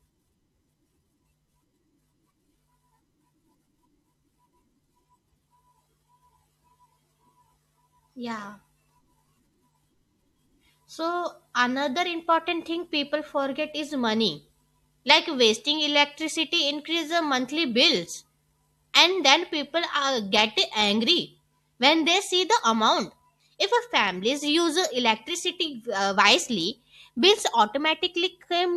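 Nothing in the recording stood out as a technical problem on listening.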